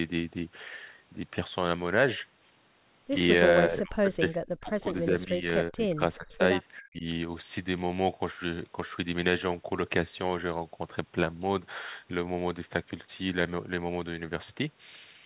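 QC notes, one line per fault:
3.69–5.49 s, 5.69–6.00 s, 6.16–6.42 s and 6.81–7.05 s, speech suppressed in double talk: the speech sinks and breaks up in pieces, the first stretch losing about 40 dB at its deepest, then shallower dips of about 25 dB and 15 dB, and a final one of about 40 dB. This is likely an echo canceller turning down the near talker while the far side speaks. Unlike packet-loss gaps, the level fades and pumps in uneven depths rather than cutting to clean silence.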